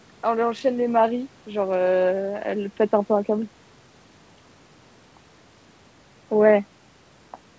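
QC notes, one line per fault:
No faults found.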